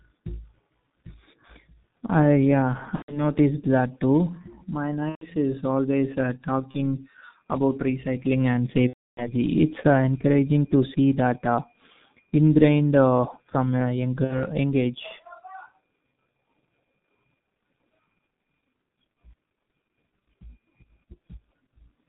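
Throughout, the speech passes through a G.723.1 codec at 6.3 kbit/s with heavy damage: nothing above 4 kHz, slow model updates, so it sounds muffled and hoarse with smeared consonants.

VoIP packet loss concealed by the speech codec follows, with the decoder extrapolating its last pitch and filter while fading the gain. This turns the speech into a buzzy tone or coloured noise that fades at 2.96 to 3.23 s and 5.09 to 5.25 s (each fitting about 120 ms of lost packets), at 6.71 s after "is always uh", at 8.87 to 9.33 s after "about recycling and" (the longest, near 300 ms), and at 14.25 to 14.46 s between "from a" and "young age".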